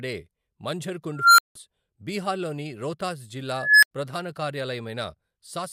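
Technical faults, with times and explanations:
1.15–1.55 s and 3.53–3.91 s: unstable filter. A recursive filter in the speech path receives bad coefficients, so its feedback grows each cycle instead of decaying. The result is a tone of around 1.5 kHz that swells over about 0.23 s the first time and 0.29 s the second, hits clipping as a harsh squeal, then overflows. The output collapses to silence for about 170 ms, then 85 ms, until the filter resets.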